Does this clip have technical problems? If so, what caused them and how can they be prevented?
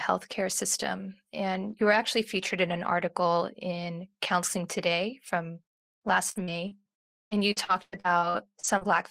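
Yes, from 6.31 to 8.88 s the speech breaks up with repeated packet loss (robotic sound). A rapid run of dropouts, the longest around 112 ms, gets patched by stretching the previous sound, so roughly a third of that stretch sounds choppy. A steadier network path with a larger jitter buffer and forward error correction would prevent it.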